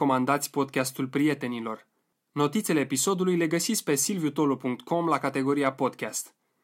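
A speech recording carrying clock slip clicks from 0.37 s to 6.48 s: faint, regular ticks at intervals of roughly 0.3 s, around twenty in all, each a single-sample discontinuity. The even spacing points to two devices running on unsynchronised clocks, likely mismatched by something on the order of 70 ppm, so the accumulated drift forces one sample to be dropped or repeated each time it reaches a full sample period.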